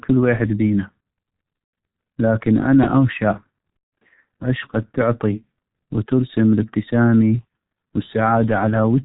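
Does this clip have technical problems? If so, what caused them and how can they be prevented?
Yes. Throughout the speech, the G.723.1 codec is audible: everything above 4 kHz is missing, consonants smear together, and the voice has a muffled, hoarse quality. The codec works in 30 ms frames and updates its voice model slowly, so fast articulation blurs. The heavy damage fits its 6.3 kbit/s mode. Unlike simple low-pass filtering, the roughness comes from coarse modelling, not just lost treble. Preventing it means using a wideband codec such as Opus or G.722.

VoIP packet loss concealed by the speech codec occurs at 1.64 to 1.73 s, a gap of about 90 ms that fits three lost frames. It happens again at 3.78 to 4.02 s, where roughly 180 ms is lost across 240 ms, with one continuous run of 150 ms. In each gap the decoder repeats its last pitch and filter at falling gain, so the speech turns into a fading buzzy tone or coloured noise. 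Because each frame builds on the last, the voice stays weak for a moment after packets return. That lingering recovery distinguishes this fault from a plain dropout, which cuts to silence and resumes cleanly. Adding forward error correction and a larger jitter buffer helps prevent it.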